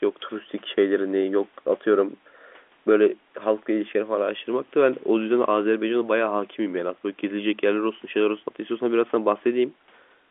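No faults are audible: the speech sits in the ordinary telephone band of roughly 250 Hz to 3.5 kHz, which fits G.711 A-law telephone coding at 64 kbps, and any coding noise is faint at most.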